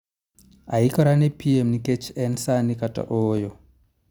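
From 0.29 s to 3.37 s the speech carries a click repeating every 1.03 s, about four in all. These are clock drift buffer slips. The likely cause is two devices running on separate clocks that disagree by roughly 300 ppm, so the buffer between them drifts until a short block of around 15 samples is dropped or repeated. The metronomic spacing and the absence of any audible gap set these apart from random dropouts.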